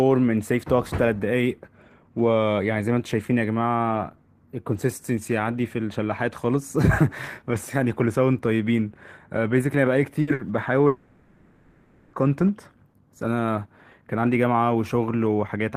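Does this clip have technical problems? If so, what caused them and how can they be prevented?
Yes. In two bursts of packet loss, at 10.21 to 10.30 s and 10.33 to 10.42 s, consecutive packets arrived late or not at all. The receiver extended the last sound for about 60 ms each time, fading it, and roughly 60 ms of speech is missing at each gap. A larger jitter buffer and forward error correction would help absorb such short bursts.

From 10.87 to 12.16 s, a long network dropout likely stopped all incoming audio. The receiver filled about 1.26 s with a fading buzz or hiss before speech resumed with that stretch missing. A more stable connection, such as wired rather than congested wireless, would help prevent drops this long.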